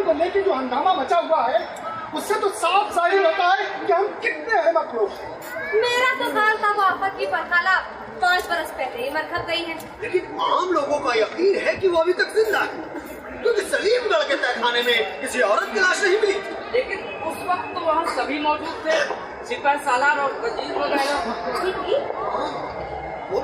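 No technical faults can be heard in this clip.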